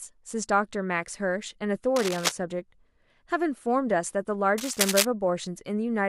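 A speech recording with two bursts of cable scratch noise. The first runs from 1.95 to 2.32 s, sitting about 5 dB below the speech. The second runs from 4.58 to 5.06 s and is louder, roughly level with the speech. Both sound like dense, ragged scratching laid over the signal. The likely cause is a worn cable, connector or control being moved, so its contact resistance jumps around rapidly.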